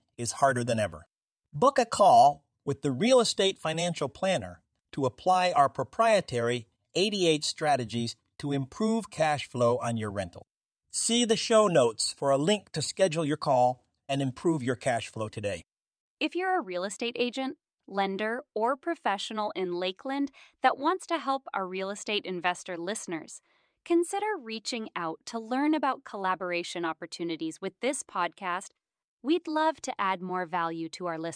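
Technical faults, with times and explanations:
Nothing in this recording stands out as a technical fault, so there's nothing to list here.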